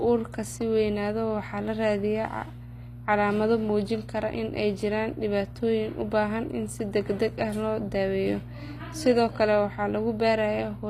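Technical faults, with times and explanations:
Throughout, mains hum: power-line interference, from a ground loop or a nearby transformer, leaks into the signal path. It adds a steady 60 Hz tone with low harmonics beneath the speech, sitting only about 15 dB below it, so the buzz stays prominent even during talking.
Throughout, HE-AAC compression: a low-bitrate codec, likely HE-AAC, codes only the lower spectrum and synthesises the treble from copied lower bands. The rebuilt highs sound gritty and lispy on s sounds, with plainly audible damage and nothing above 15.4 kHz.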